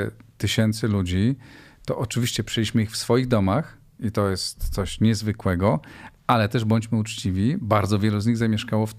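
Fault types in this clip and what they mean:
No technical faults are audible in this recording.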